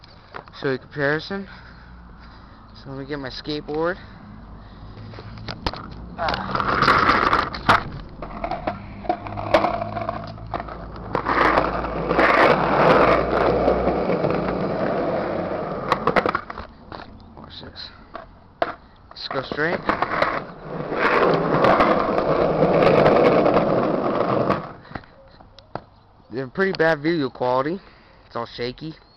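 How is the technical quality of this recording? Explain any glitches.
Nothing to flag here: I didn't catch any glitches anywhere in the recording, so there's nothing to explain.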